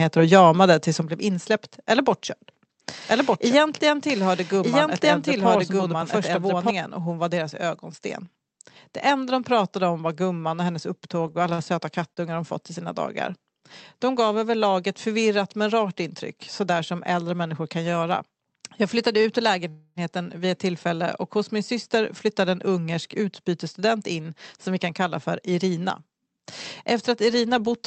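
At 1.02 s, just before "blev insläppt eller bortkörd", the microphone volume stepped down. The whole speech level, background included, falls by about 5 dB in a single step, most likely because the call software judged the input too hot and cut the device gain.

From 3.09 to 6.71 s, ending just before "och hon var deras", there is a doubled audio track. A second full-band copy of the speech runs about a second behind at roughly the same level, with no reverberant tail, and switches in and out abruptly. The likely cause is a duplicate capture path or a misaligned edit.

Between "var gumman och hennes" and "de fått i sina", from 11.27 to 12.20 s, repeated packet loss makes the speech choppy and robotic. Four short holes, the longest about 41 ms, are patched by extending the preceding sound. About 104 ms is filled this way, roughly 11% of the stretch, and about 40 ms of the original audio is lost.

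From 19.21 to 19.27 s, a short stall from a late packet holds one sound about 27 ms too long. The jitter buffer ran dry and stretched the last audio until the packet arrived. Nothing is lost, but everything after is delayed by about 27 ms.

From 19.69 to 19.99 s, a call audio freeze follows, likely from packets held up in transit. The last sound is prolonged for about 273 ms as a fading buzz that touches silence for about 10 ms. Playback then resumes where it stopped, with nothing missing. Throughout, the Opus call path rolls off the top end near 8 kHz.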